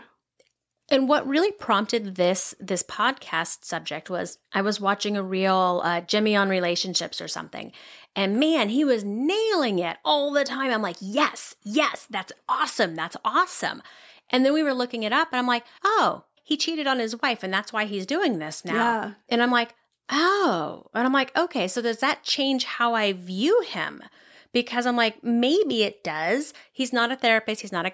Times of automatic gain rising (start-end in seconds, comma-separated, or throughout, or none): none